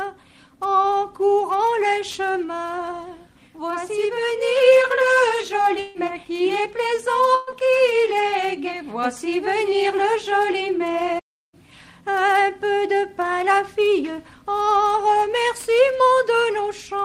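At 5.79 s the sound breaks off and a fading buzz or hiss carries on for about 0.15 s before the audio picks up again at 5.98 s, skipping roughly 160 ms. That pattern is most likely a long network dropout, with the receiver stretching the last sound across the hole.

From 7.35 to 7.50 s there's a burst of packet loss. Around 120 ms of audio never made it, and the receiver padded the gap by holding the last sound and letting it fade as a short buzz or hiss. Playback then resumes further on, minus that chunk.

At 11.19 s the output goes dead silent for about 0.34 s, then carries on at 11.54 s. That's a playback stall, most likely the player running dry or getting its thread blocked, so it simply had nothing to play until it caught up.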